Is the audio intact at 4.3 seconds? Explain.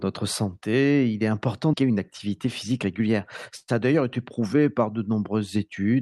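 No. A jitter buffer speed-up runs from 3.63 to 4.73 s. Pitch-period slices, about a tenth of a second in total, are cut. Speech runs 9% faster, same pitch, hurried.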